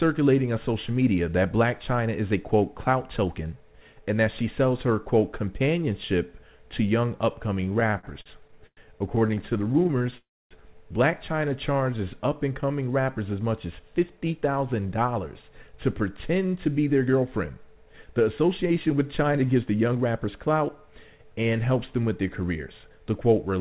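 The audio passes through a WebRTC call path whose band ends at 4 kHz, which fits G.711 mu-law at 64 kbps. Packets kept arriving late, so the jitter buffer ran dry in repeated stalls (stutter) from 7.61 to 8.80 s. The receiver bridged 15 gaps, the longest 103 ms, by continuing the last sound, so about a quarter of that stretch drags and hiccups. A second run from 9.16 to 10.15 s has 21 shorter gaps of no more than 18 ms, heard as rapid stuttering. From 10.18 to 10.54 s comes a call audio freeze. The sound stops, with about 280 ms of silence, and then resumes where it left off, most likely because packets were held up and the buffer emptied. From 11.66 to 12.76 s a jitter buffer slow-down rebuilds its reserve by repeating single pitch periods. This adds 108 ms, so the sound runs at 91% speed with unchanged pitch and drawn-out sounds. From 14.37 to 20.28 s a jitter buffer speed-up trims surplus delay by cutting short pieces, roughly 0.4 s in all, so the audio runs at 107% and sounds hurried.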